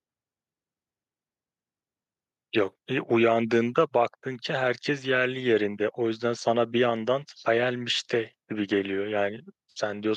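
No technical faults are audible.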